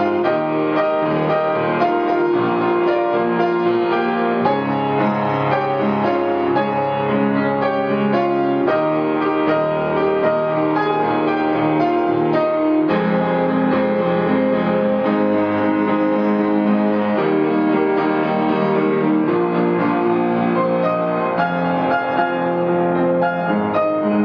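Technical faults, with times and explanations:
No technical faults are audible in this recording.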